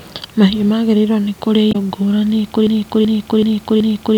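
A short speech recording with two problems. At 1.69 to 1.76 s there's a brief glitch from damaged data in the compressed stream: the decoder hits bad frames, loses sync and searches for the next frame header. Then from 2.67 s to the end it falls into a broken-record loop, with a 379 ms fragment played four times back to back. That's likely a stalled player or stream resending its last buffer, so the speech that belonged there is gone.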